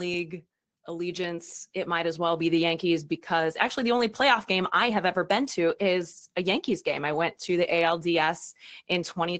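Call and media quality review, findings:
Automatic gain rising, 0.86 to 2.72 s. Speech and background swell together by about 7 dB, settling before "because actually the only". Probable component: AGC on the send side. Input judged too quiet, so gain was ramped up gradually.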